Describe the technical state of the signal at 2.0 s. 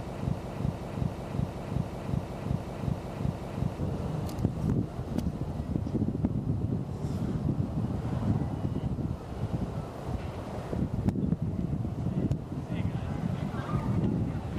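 At 2.0 s the sound is caught in a broken-record loop: a fragment of about 0.37 s plays again and again, identically and back to back, from the very start of the clip (already under way at 0.0 s) until about 3.79 s, repeating nine times in all. The likely cause is a stalled player, encoder or stream that kept resending the last piece it held, so the audio meant for that stretch never arrives.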